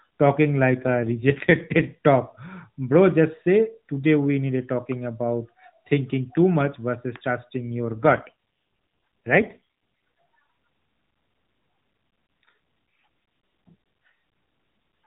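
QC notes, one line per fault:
0.71–1.94 s and 7.87–9.60 s: AMR rate drop. Speech turns buzzier and more synthetic with no gap or band change. This points to 12.2 falling to 5.9 kbit/s.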